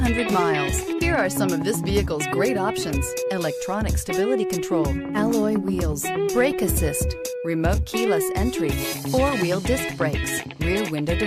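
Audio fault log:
1.02–1.25 s and 6.37–6.86 s, hard clipping: the loudest peaks crackle with a brittle, gritty edge, a little rougher in the second stretch. The signal overshoots what the stage can pass, by about 2 dB and then about 3 dB, so its peaks are sliced flat, adding high harmonics.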